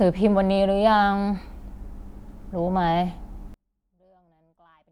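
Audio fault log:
3.54–4.91 s, one channel inverted: the speech suddenly drops to a faint residue about 38 dB down and stays there to the end. The likely cause is one stereo channel flipping polarity, so the content common to both channels cancels when summed to mono.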